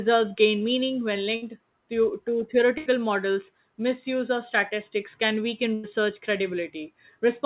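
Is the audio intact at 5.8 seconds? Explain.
No. A burst of packet loss hits at 5.74 to 5.86 s, right after "of statistics can weaken": the receiver stretches and fades the last sound, skipping about 100 ms.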